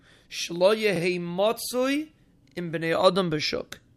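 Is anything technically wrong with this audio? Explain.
Yes. From 2.48 to 2.56 s the speech has a repeated buffer: the playback device received no fresh audio in time, so it replayed its last block twice more. The repeats suggest a 40 ms buffer and produce a brief hard-edged stutter. Unlike a dropout, there is no gap of silence.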